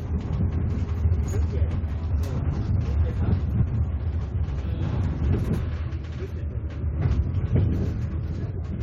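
At 3.53 to 3.72 s and again at 5.38 to 5.58 s, the sound briefly garbles into a fluttering stutter: frames out of order. In each stretch, two neighbouring blocks of roughly 93 ms, which fits runs of four frames each, were decoded swapped, so the later half plays first. Unlike a dropout or skip, nothing is missing and the timing afterwards stays intact.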